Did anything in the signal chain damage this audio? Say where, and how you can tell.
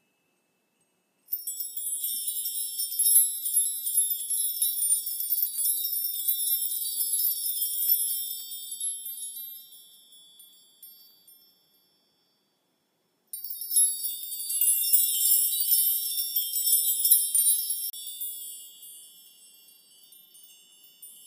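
Yes: CD skips at playback, heard as a brief tick and mute at 3.65 s and 13.61 s, and a longer gap of about 30 ms at 17.90 to 17.93 s. Unlike a plain dropout, the sound resumes from a different point, because the laser has jumped tracks on the disc's spiral.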